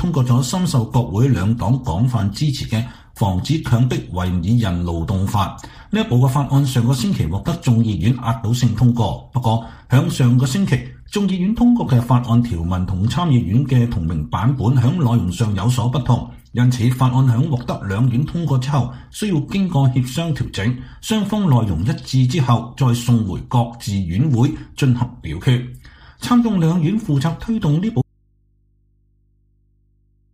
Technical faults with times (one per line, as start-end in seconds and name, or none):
28.02-30.33 audio dropout to a faint residue